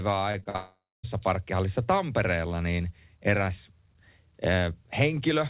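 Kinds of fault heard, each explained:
Repeated packet loss (robotic sound): Audio packets went missing four times in quick succession between 0.32 and 0.56 s, each hole up to 46 ms patched by stretching the previous sound. With about 41% of that span filled in, the narrowband speech turns choppy.
Long network dropout: The stream was likely cut off for roughly half a second, from 0.56 to 1.05 s. The receiver kept extending the last sound as a fading buzz or hiss, then gave way to about 240 ms of silence before the speech resumed.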